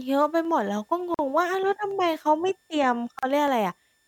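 Speech carries a faint switching supply whistle throughout, a steady tone between 1.78 and 1.79 kHz roughly 45 dB below the voice, visible on a spectrogram as a thin horizontal line. Sharp clicks at 0.45 s, 1.91 s and 3.48 s are likely dropped samples: a fraction of a millisecond is missing, so the waveform jumps and the spectrogram shows a thin vertical line at each. Gaps at a join of encoded pieces open at 1.14 to 1.19 s (45 ms) and 3.19 to 3.23 s (38 ms), two seconds apart. Separately encoded segments were spliced with their encoder delay and end padding left in, leaving silent strips with smeared edges in the waveform before the sound resumes.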